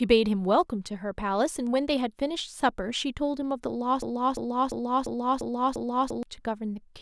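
At 4.02 s the speech gets stuck in a broken-record loop: a 0.35 s fragment repeats exactly, back to back, six times until 6.23 s. Whatever should have played there is simply gone. It's likely the player or stream stalled and kept re-sending its last buffer.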